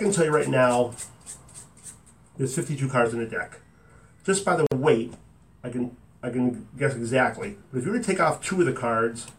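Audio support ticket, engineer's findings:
Gap at a join of encoded pieces, 4.67–4.72 s. Silence of 50 ms cuts continuous sound, then resumes. Encoder start delay and end padding left untrimmed at the join.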